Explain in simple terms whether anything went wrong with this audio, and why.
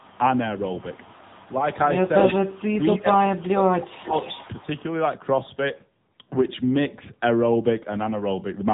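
Throughout the clip, the speech sounds muffled and buzzy and synthetic, with nothing above about 3.8 kHz. This is the AMR narrowband mobile codec, the older phone-network format. It squeezes the speech into very little data by rebuilding it from a simple model, losing the crispness.

From 0.0 to 0.18 s and from 0.56 to 1.64 s, a faint second copy of the speech trails about a quarter of a second behind. It returns briefly at 3.84 s and more loudly from 4.16 to 4.8 s. This is an echo leak, likely from a loudspeaker on the far end whose echo canceller let some sound back through.

Around 2.72 to 2.82 s, the speech dips slightly. From 3.0 to 4.13 s it drops much further, sounding faded and partly cut away. This is speech suppressed in double talk. Both sides were likely talking at once, and the echo canceller turned everything down because it couldn't separate the speaker from the echo.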